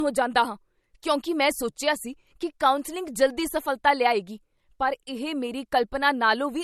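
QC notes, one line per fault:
Throughout: low-bitrate audio saved at a high bitrate. The speech stops sharply at 13.2 kHz. The cause is likely an MP3 first coded at a low rate, near 48 kbit/s, then saved again far higher. The larger file cannot restore what the first pass removed.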